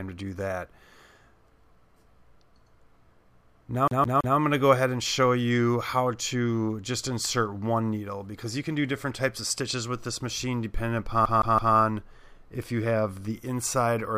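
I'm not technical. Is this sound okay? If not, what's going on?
No. The CD is stuck on one turn: a scratch knocks the laser back, so about 0.16 s of sound repeats three times with a short mute at each jump, at 3.88–4.37 s and again at 11.25–11.75 s.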